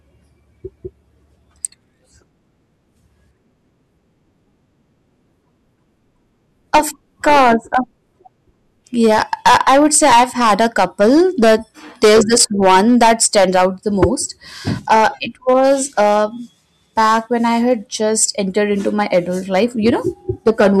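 Somewhere in the chain, a gain stage drove the speech about 14 dB beyond what the converter or number format could carry, producing hard clipping across the whole recording. Every peak that crossed the ceiling, a few percent of the samples, was sliced flat, and those squared-off tops generate a spray of high harmonics. The result is a harsh, buzzy fuzz riding on each loud syllable and crackle wherever the level spikes, present from start to finish.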